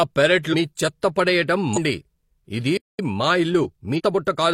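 Speech with three kinds of fault. Compressed frames are skipped at 0.49 to 0.55 s, just before "మీ చెత్త పడెయ్యటం", again at 1.73 to 1.78 s right after it, and at 3.95 to 4.01 s. Each time the speech lurches forward by about 0.3 s, roughly seven 42.7 ms frames. Nothing is silent there, which separates it from the playback stall at 2.77 to 2.99 s. That stall is a dead gap of about 216 ms, likely because the player ran out of buffered data. From 2.99 to 4.41 s a time-compressed catch-up plays the speech about 1.1 times faster to clear the backlog. The pitch stays normal, unlike a resampled speed-up, which would raise it.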